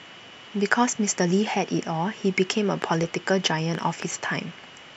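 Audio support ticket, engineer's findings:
Train of clicks, 2.82 to 4.03 s in the speech. About four sharp ticks at roughly 2.5 per second, unevenly spaced, same shape each time, poking out roughly 10 dB above the signal. Likely interference from nearby gear or a flaky interface injecting pulses.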